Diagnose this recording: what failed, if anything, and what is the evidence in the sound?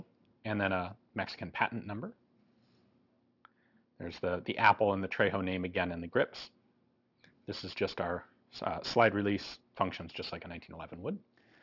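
Aliasing in sample-rate conversion, throughout: content folds around 6 kHz into gritty, unrelated tones roughly 20 dB down, fitting unfiltered downsampling to 12 kHz.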